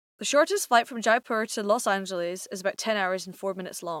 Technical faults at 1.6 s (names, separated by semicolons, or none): low bit depth without dither